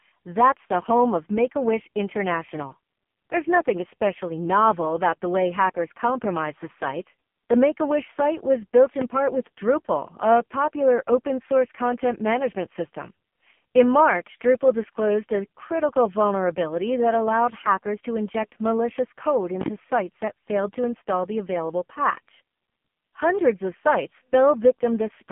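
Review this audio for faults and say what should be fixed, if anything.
AMR narrowband mobile codec damage runs throughout the clip. The speech passes only a telephone band of about 150 Hz to 3.4 kHz, with nothing above 3.6 kHz. The heavy buzzy, synthetic quality points to a low mode, around 5.15 kbps, where few pulses drive the vocal-tract model. Prevent it by recording or routing the call over a wideband path instead of a narrowband mobile link.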